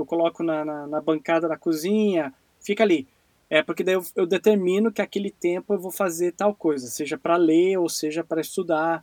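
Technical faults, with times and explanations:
Nothing technical stands out here; the speech comes through without any faults to point to.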